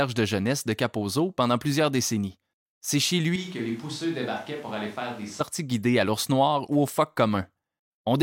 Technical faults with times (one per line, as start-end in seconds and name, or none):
3.36-5.40 switch to a distant microphone